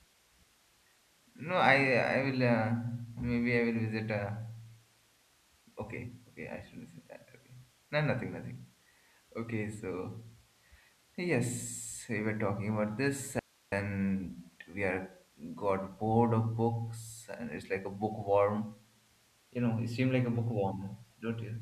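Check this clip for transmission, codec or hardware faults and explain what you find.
One fault stands out. An audio dropout to a faint residue occurs from 13.39 to 13.72 s, just after "were talking about this." The speech cuts out abruptly for about 0.33 s, leaving only hiss roughly 35 dB below the speech level. This likely comes from a momentary loss of the signal while the downstream path stayed live.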